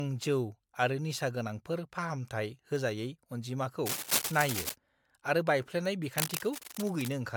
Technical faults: generation loss; bit error spike; cable scratch noise

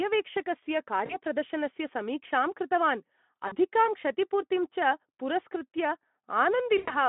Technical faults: VoIP packet loss concealed by the speech codec

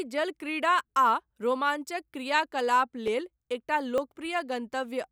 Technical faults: dropped buffer (overrun)

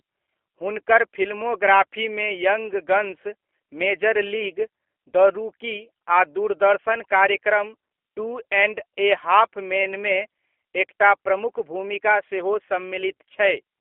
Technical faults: G.729 codec

